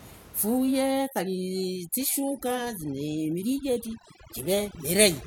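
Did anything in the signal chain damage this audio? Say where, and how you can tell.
Yes, overdone noise removal in the call processing stage from 1.05 s onward: the background drops to twinkly near-silence, as bands near the noise estimate get gated away.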